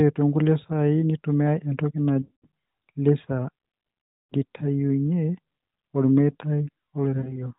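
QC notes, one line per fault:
2.22–2.47 s, 4.15–4.34 s, 7.18–7.46 s: lost AMR speech frames. The decoder repeats the last good frame with falling gain, so the sound drags out and fades. The spectrogram shows smeared, static harmonics below 4 kHz that taper into a gap, and the waveform envelope decays.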